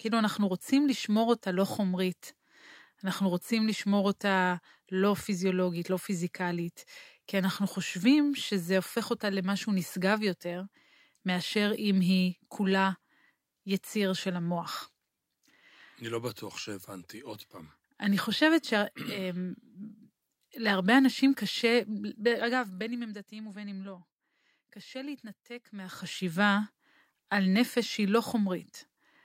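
The speech recording has no audible technical fault, and the signal comes through intact and undisturbed throughout.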